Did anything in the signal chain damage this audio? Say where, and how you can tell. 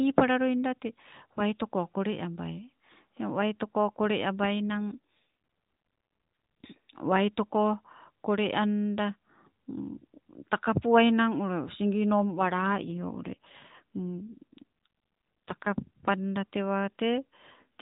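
Yes. AMR rate drop at 4.70–6.69 s and 12.21–16.00 s: the network forced the codec lower, making the speech buzzier and more synthetic without gaps, consistent with 12.2 falling to 5.9 kbps.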